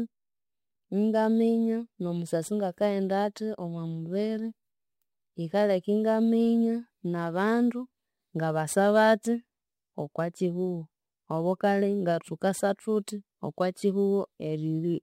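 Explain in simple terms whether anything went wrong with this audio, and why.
Crude rate conversion runs through the whole recording: samples were simply dropped, which fits a 48 kHz to 44.1 kHz change, leaving a faint gritty fizz riding on the speech.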